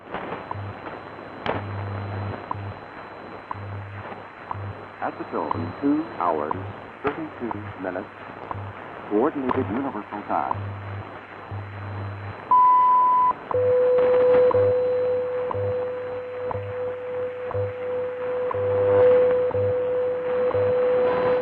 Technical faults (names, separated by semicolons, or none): MP2 compression